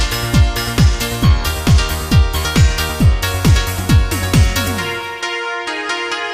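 Sample clock jitter runs through the whole clip. The converter's clock wanders by about half a microsecond, so samples land slightly off time. The error sits roughly 45 dB below the signal. It adds a faint hiss that swells on loud, bright passages and vanishes in silence.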